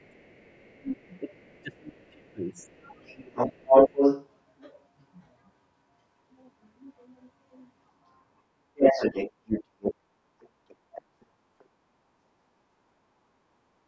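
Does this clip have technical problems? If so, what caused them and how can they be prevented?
Yes. There are three kinds of fault.

Speech suppressed in double talk: the speech dips or breaks into pieces from 0.0 to 3.59 s, by as much as about 30 dB and for roughly a second and a half in total. Shorter dips occur at 9.53 to 9.62 s (shallow, about 5 dB), 10.68 to 11.59 s and 12.13 to 12.31 s (both about 25 dB). The likely cause is an echo canceller that, with both sides talking at once, could not tell the near talker from the loudspeaker echo and attenuated everything. Using a headset, or a canceller with better double-talk detection, prevents this.

Other side's voice leaking through: a second voice is audible at roughly the same level as the speech from 0.0 to 4.52 s and from 8.75 to 11.02 s, plus a faint scrap about 35 dB down at 11.63 to 11.67 s. This is likely the far end played on a loudspeaker and picked up by the microphone, which the echo canceller did not fully remove. 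Headphones, a lower loudspeaker volume or more distance between loudspeaker and microphone would keep it out.

Background gated by the echo canceller: the room sound drops by about 14 dB for roughly 150 ms at 13.53 to 13.66 s, then returns. The canceller clamped the microphone while the loudspeaker was playing. Gentler suppression settings, or comfort-noise fill during suppression, would smooth this over.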